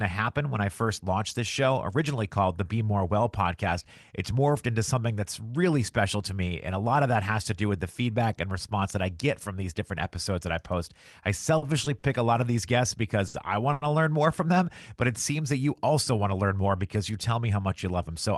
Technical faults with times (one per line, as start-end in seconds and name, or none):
11.57-12.04 short stall from a late packet
13.28-13.36 short stall from a late packet
13.73-13.84 short stall from a late packet
15.73-16.97 jitter buffer speed-up